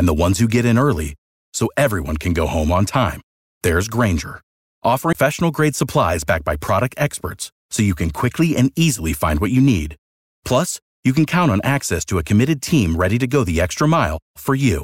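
A tick and very brief mute at 5.13 to 5.15 s, then the speech resumes abruptly at "grade supplies backed by": a CD skip, the laser jumping tracks.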